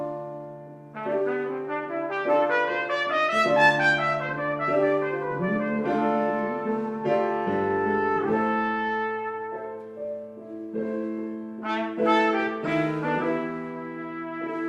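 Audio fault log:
No fault is heard in this audio.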